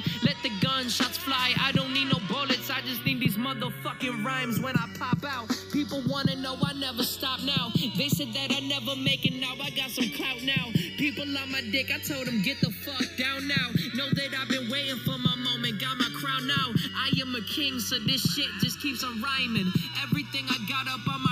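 Throughout the clip the channels are drifting apart: two devices on clocks differing by a few tens of parts per million let the inter-channel delay creep to under a millisecond. Summed to mono, this produces slow flanging, seen on a spectrogram as dark comb notches sliding gradually across frequency.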